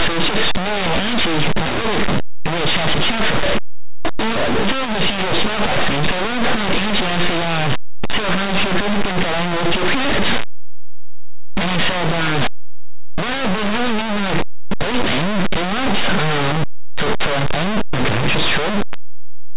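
It's a speech clip, and the whole thing is wrecked by linear audio read as companded: the samples look to have been written as plain linear 8-bit but decoded as mu-law. Mu-law codes put their biggest magnitudes right next to zero, so tiny signal values just on one side of zero blow up to the largest outputs while their neighbours on the other side stay small. The result is a very loud, harsh distortion from start to finish.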